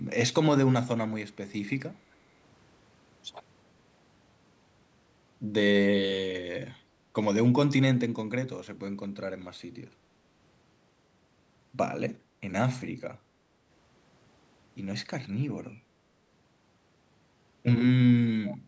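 Right at the end, 18.46 to 18.58 s, there's a brief echo leak: a faint copy of the speech trailing 380 ms behind, likely from a loudspeaker echo canceller letting some through.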